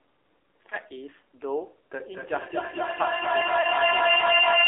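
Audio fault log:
throughout, AMR narrowband mobile codec: the band is squeezed to roughly 300 Hz to 3.6 kHz, with a buzzy, synthetic edge that fits AMR-NB at about 7.4 kbps.
0.70 to 0.76 s, lost AMR speech frames: a single dropped frame, about 20 ms, that the decoder papered over with the last good settings, so you hear a quick dip or warble.
1.98 s to the end, feedback howl: a ringing tone around 3 kHz builds to about 11 dB over the speech, with a loop delay of about 200 ms, as the mic-to-speaker loop keeps feeding itself.
3.62 to 3.67 s, lost AMR speech frames: another lone 20 ms frame dropped, so there's a brief smeared wobble where the decoder guessed from the previous frame.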